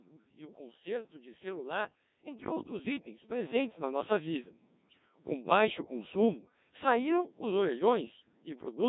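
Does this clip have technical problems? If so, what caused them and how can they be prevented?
Yes, there are three. The whole clip has been through the Codec 2 vocoder, and the damage is heavy. The speech has that robotic, buzzy quality you get when only pitch, voicing, energy and a rough spectral shape are sent, and the decoder rebuilds everything from sine waves instead of keeping the actual waveform. How thin it is fits the 1.3 kbit/s mode. If you need natural-sounding speech, use a waveform codec such as Opus at a reasonable bitrate.

From 0.54 to 4.08 s you can hear automatic gain rising. The gain control decided the input was too quiet and slowly pushed it up, by about 12 dB over roughly three and a half seconds, so the speech and the background swell together. Setting a sensible input level at the source, so the AGC doesn't have to chase it, would prevent this.

Near the end, from 7.77 to 7.83 s, there's a short burst of bit errors on digital voice radio. 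Flipped bits hit the vocoder, and because every bit controls the pitch, level or tone of a whole frame, the sound jumps into a brief warbly, robotic glitch. It's short enough to point to a single damaged frame, with an error rate of a few percent. Better signal strength or stronger error protection on the link would stop it.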